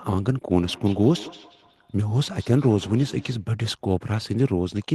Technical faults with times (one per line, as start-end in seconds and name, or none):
0.53-3.51 feedback echo between two devices